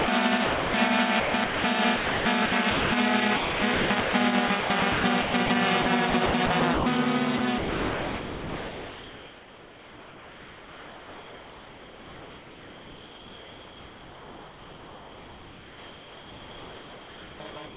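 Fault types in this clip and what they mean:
Sound dropped by the voice detector: at 0.0 s and 0.44 to 0.74 s the sound gives way to steady comfort noise, likely because the sender's detector judged it background.
Sound chopped by the voice detector: from 1.2 s to the end, the sound repeatedly breaks into comfort noise and back, likely from the sender's detector toggling transmission.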